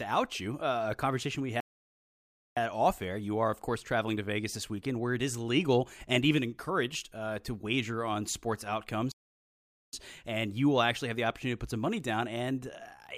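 At 1.60 s, after "uh a conversation we", the speech goes silent for 0.96 s before "off air you are", and again at 9.12 s after "to wager on sports" for 0.81 s. This is a playback stall, likely the player running short of data. Each is a clean, near-second silence in mid-flow, far longer than a brief dropout.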